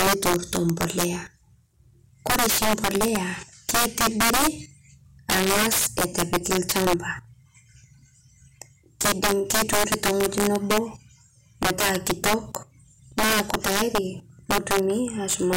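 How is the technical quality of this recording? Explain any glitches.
The technical quality is poor, with two separate problems in this speech recording.

Throughout, loud moments break into harsh, violent cracks, far sharper than ordinary clipping. This is integer overflow: the signal was pushed about 15 dB past full scale, and instead of being held at the limit, each peak that exceeded the largest integer value wrapped around to the opposite sign. The waveform jumps across the entire range in an instant, which produces the crack. Only a small share of samples, a few percent, go over, so the damage sits on the peaks.

At 4.35 s, at 7.17 s just after "ang'az etu epikii lchampa", and at 9.66 s, there is a brief chirp or blip, each lasting only a moment. These are damaged data in a compressed stream: corrupted bytes left the decoder unable to read those frames correctly, so it lost sync and produced garbage until it found the next valid frame header. 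The result is a short squawk where the signal should be.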